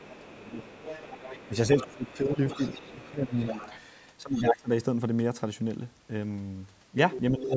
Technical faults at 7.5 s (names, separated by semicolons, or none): speech suppressed in double talk